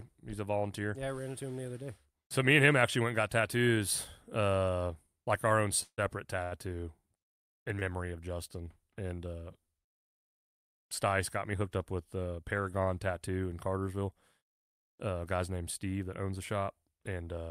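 At 5.83 s, just after "uh like our own", a call audio freeze holds the sound for about 0.15 s until 6.00 s. Delayed packets likely starved the jitter buffer. The last sound carries on as a fading buzz or hiss, then about 70 ms of silence, before speech resumes where it stopped.

At 6.44 s a short stall from a late packet stretches the current sound by about 80 ms, ending at 6.54 s. The jitter buffer ran dry briefly, so one sound is held too long with a slight buzz or dip before continuing. Nothing is skipped.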